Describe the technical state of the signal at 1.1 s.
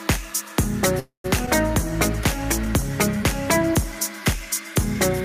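At 1.1 s the signal is inside a call audio freeze running from 0.99 to 1.26 s. The last sound is stretched into a fading buzz that decays into roughly 120 ms of silence before the audio picks up exactly where it stopped. The likely cause is delayed packets draining the jitter buffer. Unlike a packet-loss dropout, nothing is cut out: a gap of about 0.25 s is inserted, and everything after it arrives that much later.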